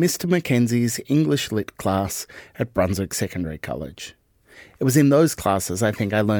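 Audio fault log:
No fault is heard anywhere in this speech clip. There is nothing to log for any part of it.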